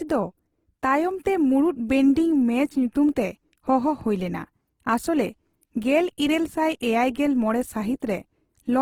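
Throughout, the speech sounds rough and grainy, likely from Opus compression at a low bitrate near 16 kbps in CELT mode; a spectrogram shows noise-filled bands with few holes, reaching about 20.2 kHz.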